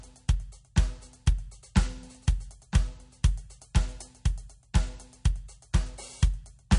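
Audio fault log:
Throughout, MP3 compression: the music is plainly damaged, with nothing at all above 10.6 kHz, so the top end sounds dull and boxed in, and there's a watery, swirly texture to what's left. That's likely a starved MP3 encode, and the damage points to a low rate around 40 kbps. The encoder chops the treble at a fixed frequency and drops quieter detail that flickers in and out frame to frame, which makes the swirl.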